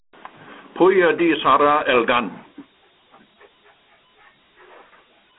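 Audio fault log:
Throughout: Dialogic VOX ADPCM. The speech carries a gritty, plainly audible hiss that rides on the voice. That points to 4-bit adaptive steps at about 32 kbps. Nothing sits above 3.9 kHz, and the band runs roughly 250 Hz to 3.5 kHz. Unlike plain narrowband filtering, the grit tracks the speech.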